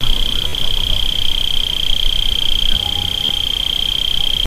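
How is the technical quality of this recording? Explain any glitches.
The recording has two short dropouts, both Bluetooth stutter. The first runs from about 0.48 to 0.53 s, a gap of roughly 53 ms, and the second from 3.25 to 3.29 s, about 40 ms. Packets didn't arrive in time, so the receiver kept replaying its last short slice of audio. You hear a quick buzzy, machine-gun flutter, and then the sound picks up a little further on, as though it kept playing underneath.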